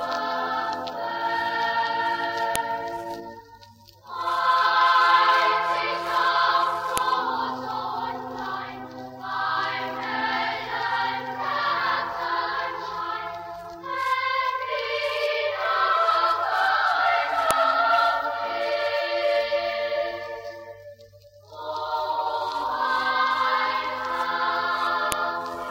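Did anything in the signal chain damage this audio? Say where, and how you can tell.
Yes. At the storage stage, a file header was played as audio: sharp, loud clicks at 2.56, 6.98, 17.51 and 25.12 s, each regardless of the surrounding signal. Separate WAV segments were joined without stripping headers, so those header bytes were decoded as samples.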